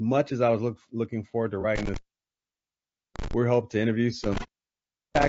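Throughout the speech, a low-bitrate encoder running with very short frames is likely responsible for what sounds like low-delay AAC compression (AAC-ELD), with a rate that fits something around 32 kbps. At this rate there are too few bits to code every frequency line cleanly. The damage is plainly audible: the voice is rough and grainy, noise sits between the harmonics, and the top band sounds thin and artificial.

Just after "look looking forward to", from 1.61 to 1.65 s, a piece of the stream failed to arrive. The decoder covered the gap by rebuilding it from the last good spectrum. This is AAC frame loss with concealment, and the 30 ms gap fits a single missing frame. It is heard as a brief smeared, noisy blip in the sound.

From 1.76 to 3.33 s, an intermittent contact opens the signal path for about 1.2 s, as a loose plug or cable would. The sound cuts out with crackle at the break and again where it returns, and only faint hiss remains in between.

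A second intermittent contact runs from 4.24 to 5.28 s, with the line open for roughly 0.77 s. It brings the same crackling dropout into low hiss.

Within that stretch, from 4.40 to 4.48 s, just after "hoping to interview", a second AAC frame loss with concealment occurs. The decoder again fills the 30 ms gap from the previous spectrum, and the result is a short, phasey, noisy smear.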